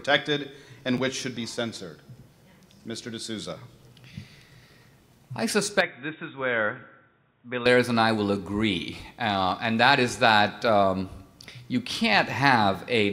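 Between 0.97 and 0.99 s, chunks out of order: a short 10.67 ms chunk plays one slot late, giving a jumbled moment rather than a dropout, since nothing is missing.

From 5.81 to 7.66 s the sound turns dull, with nothing above 3.8 kHz, a faint new noise floor about 50 dB down, and slightly lower level, with no gap. This is likely an input switched to a poorer device, not a simple filter.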